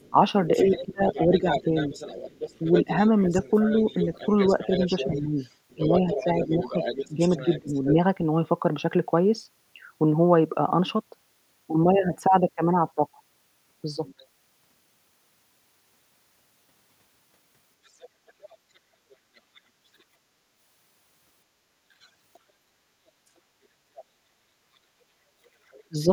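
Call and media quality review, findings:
Other side's voice leaking through, 0.0–7.91 s: far-end talk only about 10 dB under the near talker. Likely the echo canceller leaving residual loudspeaker pickup in the mic. Fainter scraps, about 25–35 dB down, at 14.06–14.25, 17.85–20.02, 22.01–22.39, 23.97–24.04 and 25.71–26.05 s.

Speech suppressed in double talk, 0.1–7.96 s: near talker ducks in and out while both sides talk, dips up to roughly 15 dB, maybe a second and a half total. Likely the canceller/suppressor can't separate talker from echo and pulls both down. Again at 25.85–26.09 s: short hit, roughly 30 dB deep, about 150 ms.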